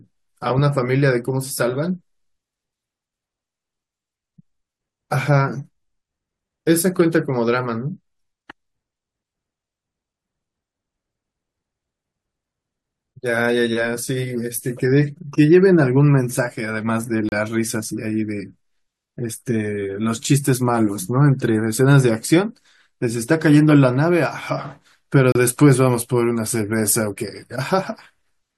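At 17.29 to 17.32 s, and again at 25.32 to 25.35 s, the speech drops out for roughly 33 ms with hard edges. It's a gap between stream segments: the timestamps of adjacent chunks don't quite meet, so the player pads the hole with silence. Nothing is lost, but each hole pushes the timeline back about 32 to 33 ms. The 8-second spacing fits segments about 4 seconds long, with the seam falling every other boundary.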